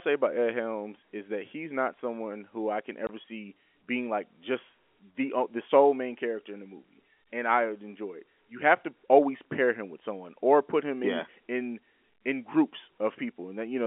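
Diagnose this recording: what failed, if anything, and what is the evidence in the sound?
A hard-edged 20 ms silent hole cuts the speech from 3.07 to 3.09 s: network packet loss filled with silence, which fits two dropped 10 ms packets.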